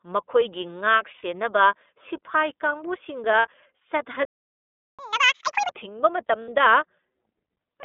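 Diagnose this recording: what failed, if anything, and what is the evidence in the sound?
At the codec stage, the whole clip is narrowband speech confined to roughly 250 Hz to 3.6 kHz, with the plainly audible rough, slightly synthetic texture of the iLBC codec. Its sound fits the 13.33 kbps mode with 30 ms frames, where each frame's excitation is coded independently. On a spectrogram the energy stops sharply at the 3.6 kHz ceiling, nothing sits below 250 Hz, and harmonics look slightly smeared rather than cleanly striated.

At the network stage, lost iLBC frames show up three times: 1.16 to 1.23 s, 3.38 to 3.47 s (right after "ꯁꯤꯐꯥꯏ ꯀꯥꯡꯕꯨꯁꯤꯡꯒ"), and 6.42 to 6.48 s. Each gap is 60 ms, which fits two dropped 30 ms packets. The decoder concealed each one by repeating the last pitch cycle mixed with noise, so it sounds like a brief held, buzzy vowel. On the spectrogram these appear as short, flat, repetitive harmonic patches, and clean speech resumes immediately because frames stand alone.

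At the playback stage, a playback stall silences the output from 4.25 to 4.99 s, about 0.74 s, cutting the sound off mid-flow. The likely cause is a buffer underrun or a blocked audio thread. The waveform drops to a flat line with an abrupt edge at both ends, and the spectrogram shows a clean vertical blank band across all frequencies.

Also at the playback stage, a catch-up at higher speed follows the stall immediately, from 4.99 to 5.72 s. The player resampled its backlog at 2x speed, so the sound is hurried and raised in pitch by around ten semitones, then snaps back to normal. On the spectrogram the harmonics in that stretch sit visibly higher and more widely spaced, and syllable envelopes in the waveform are compressed to half their length.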